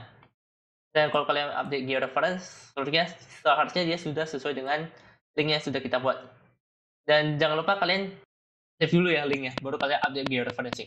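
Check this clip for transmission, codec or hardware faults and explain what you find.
There's one fault: a train of clicks from 9.33 to 10.74 s. About seven near-identical pulses arrive at a steady 4.3 per second, peaking around 20 dB above the sound, heard as regular ticking. The likely source is nearby equipment interference or a faulty connection or power supply.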